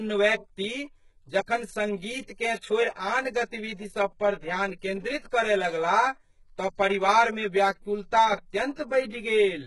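Throughout this speech recording the sound has a hollow, phasey colouring, with fixed notches running up the spectrum from about 50 Hz and spaced roughly every 100 Hz. That is channel delay (comb filtering): one channel arrives around 10 ms late, and when the two are summed to mono, whatever they share cancels at those evenly spaced frequencies. At a gap that long, the comb sits close enough together to hollow out the whole voice rather than just dulling the top. The upper range is also heavily damaged. The treble sounds gritty and metallic, s sounds come out lispy, and nothing reaches above 11.5 kHz. This points to HE-AAC compression, likely at a very low bitrate around 12 kbps. The codec keeps only the lower spectrum and rebuilds the treble by copying lower bands upward under a coarse envelope, so the harmonics no longer line up across the crossover.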